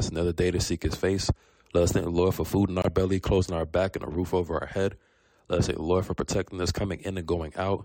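At 2.82 s the audio drops abruptly into silence for about 38 ms, resuming at 2.86 s. This is a corrupt frame muted: damaged compressed data was rejected by the decoder, and the player substituted silence for the lost material rather than attempting to reconstruct it. The hole's length fits two consecutive frames of roughly 19 ms each. There is no time shift on either side of the gap, so the surrounding material stays correctly aligned.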